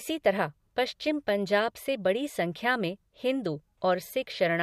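No technical faults can be heard anywhere in the recording; the signal stays intact and continuous throughout.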